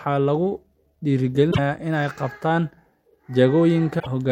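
A speech recording with two short bursts of damaged data in a compressed stream, at 1.48 to 1.59 s and 3.96 to 4.07 s. In each, corrupted bytes make the decoder misread frames and lose sync for about 0.11 s, producing a brief disturbance until it finds the next frame header.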